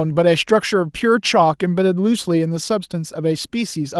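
No faults in this speech clip; the Opus voice compression keeps the full band with only light coding texture, consistent with hybrid mode at around 24 kbps.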